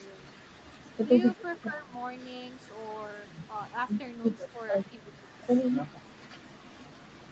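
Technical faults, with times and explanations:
1.51–1.64 s, echo leak: a faint delayed copy of the speech surfaces for a brief scrap, sitting roughly 30 dB under the direct speech and trailing it by about 512 ms. The likely cause is a far end playing the call over a loudspeaker, where the echo canceller failed to scrub all of the pickup from its microphone, so a residue was returned down the line as a delayed repeat.
1.67–1.93 s, 4.52–4.59 s, 4.89–4.94 s, speech suppressed in double talk: the speech sinks, by around 10 dB at its deepest, for roughly 300 ms in the first stretch, and in short chunks of about 70 ms and 50 ms later. This likely comes from an echo canceller facing simultaneous talk from both ends: unable to tell its local talker from loudspeaker echo, it attenuated everything, carving audible dips into the speech.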